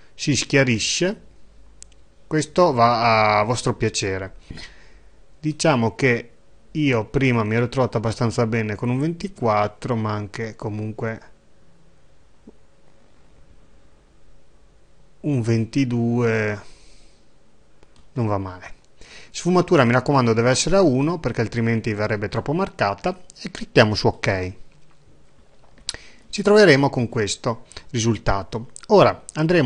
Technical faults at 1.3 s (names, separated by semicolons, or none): none